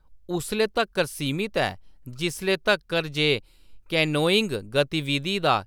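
No technical faults are audible.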